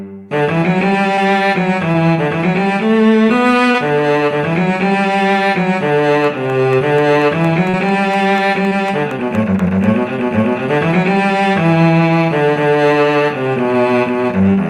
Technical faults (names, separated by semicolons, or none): short concealed packet loss; train of clicks